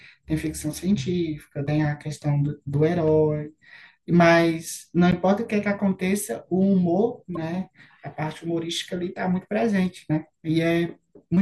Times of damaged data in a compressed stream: 1.65-1.69, 5.11-5.13, 7.35-7.37

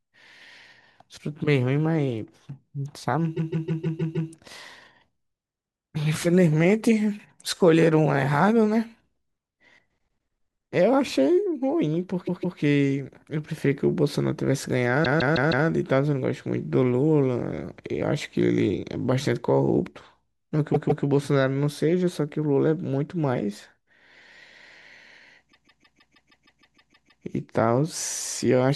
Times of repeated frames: 3.36-4.30, 12.27-12.58, 15.03-15.66, 20.73-21.04, 25.51-27.23

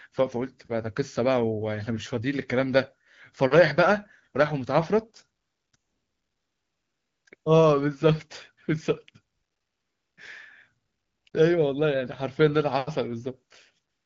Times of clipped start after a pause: none

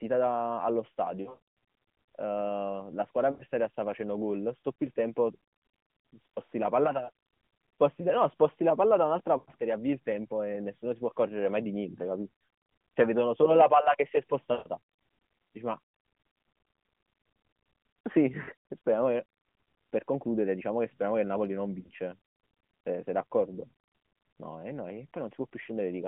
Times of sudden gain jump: none

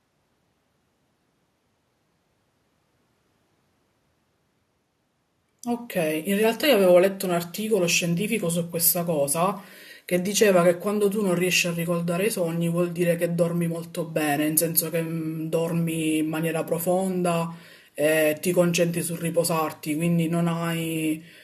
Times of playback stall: none

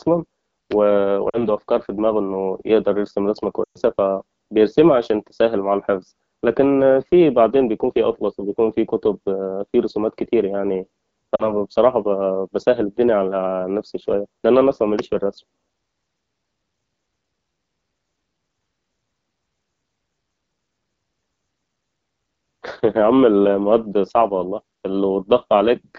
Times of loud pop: 0.72-0.74, 14.99-15.01

